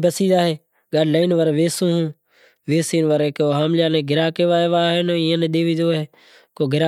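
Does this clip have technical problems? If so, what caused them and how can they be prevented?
Yes. At 1.23 s, right after "بسی زائیں گاڈی", there is a corrupt frame decoded fault: a brief chirp-like blip peaking somewhere around -25 dBFS and lasting about one codec frame. Flipped bits in that compressed frame made the decoder rebuild energy at the wrong frequencies. A lost frame would leave a gap or a smeared repeat, but this one brings in a sound that doesn't belong there. Checksums or error-correcting transport with frame rejection would prevent it.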